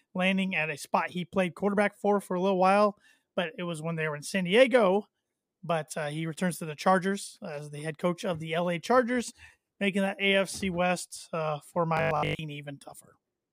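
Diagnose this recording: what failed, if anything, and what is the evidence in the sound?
Between 11.97 and 12.39 s the speech turns into a rigid, metallic 50 Hz buzz. This is robotic sound from repeated short buffers, likely a driver or buffer starvation that loops the last 20 ms and skips most real audio. A spectrogram shows an even 50 Hz harmonic comb, and the waveform shows identical repeating cycles.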